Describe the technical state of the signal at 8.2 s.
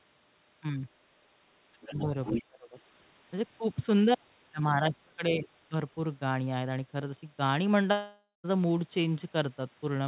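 At 8.2 s the sound sits inside a gap from 7.92 to 8.46 s, likely a long network dropout. About half a second never arrives, and the receiver stretches the last sound into a fading buzz before near-silence. Unlike a brief packet-loss click, audio resumes only after a clear hole.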